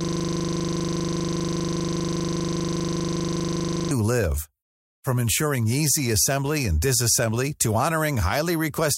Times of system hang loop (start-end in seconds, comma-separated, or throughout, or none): 0.00-3.91